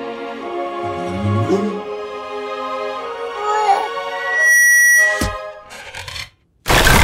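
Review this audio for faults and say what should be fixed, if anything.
From 4.11 s to 5.38 s there's a loudspeaker feedback squeal, a single tone at 1.9 kHz that swells up over a bit under half a second and ends up roughly 10 dB above everything else. The mic is hearing the speaker it feeds, and at that one frequency the loop has more than unity gain, so the tone keeps feeding on itself. To prevent it, pull the mic back from the speaker or notch out 1.9 kHz in the monitor feed.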